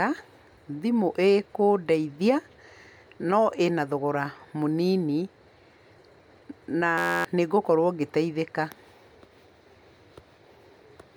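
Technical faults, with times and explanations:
6.98–7.25 s, system hang loop: The speech abruptly gives way to a steady buzz at about 86 Hz, then resumes with about a third of a second of audio missing. A fragment only 11.6 ms long, consistent with a 512-sample buffer, repeats exactly 23 times. The system or driver stalled while the sound hardware kept replaying the same ring buffer. The loop is so short that the repeats fuse into a tone at the loop rate rather than a stutter.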